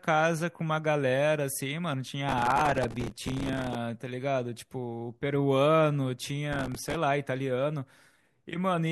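Processor overload crackle grits the speech at 2.29–3.75 s and 6.53–6.95 s. Many missed buffers of a few milliseconds each repeat old audio, giving a dense tearing run rather than one isolated click.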